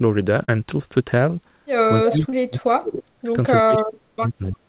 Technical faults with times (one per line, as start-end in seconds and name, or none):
0.44-0.50 short concealed packet loss
2.00-3.29 speech suppressed in double talk
2.09-2.13 echo leak
2.30-2.34 short concealed packet loss
3.61-4.64 speech suppressed in double talk